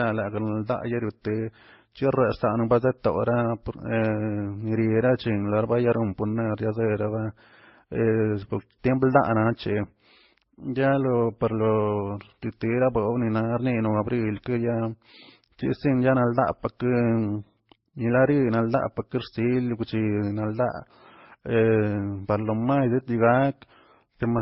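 Right from the start and all the way through, the speech has nothing above about 5.6 kHz, and it carries a mix of artefacts that don't belong to one codec: the different codecs' artefacts are heard together. That points to transcoding between lossy codecs, likely a very low-bitrate MP3-style first pass whose damage and cut-off were kept, then re-encoded at higher rates, with each later codec adding its own artefacts on top.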